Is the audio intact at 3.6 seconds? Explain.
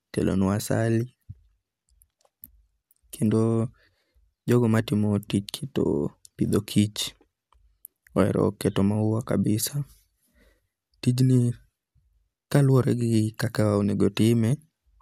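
No. At 3.6 seconds, as across the whole clip, the speech shows generation loss. It was likely decoded and re-encoded about four times through a lossy codec, each pass quantising again on a shifted frame grid so that noise piles up. The character fits MP2 at around 128 kbit/s. Nothing is present above about 16.7 kHz, and the sound is swirly, smeared and hollow, with blurred attacks.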